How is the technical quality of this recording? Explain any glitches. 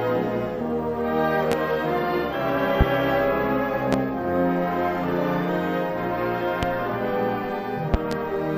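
The recording is marred by a series of loud pops. Sharp thumps land at 1.52, 2.81, 3.93 and 6.63 s, each lasting about 30 ms, and a double pop runs from 7.94 to 8.15 s. They peak at around 20 dB above the surrounding sound, which carries on underneath each one. The likely cause is a sudden voltage step or pulse, from a plug, switch, static discharge or driver glitch, entering the signal chain, where the downstream circuitry shapes it into a brief, percussive pulse.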